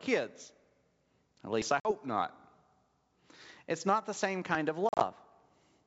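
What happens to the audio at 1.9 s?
From 1.80 to 1.92 s the speech breaks up with packet loss on an ADPCM call. About 50 ms of audio, which points to around five lost packets, is replaced by silence. The decoder's adaptive predictor and step size then drift from the sender's, so the speech resumes slightly distorted before settling. On a waveform this is a flat, hard-edged gap; a spectrogram shows a blank vertical band.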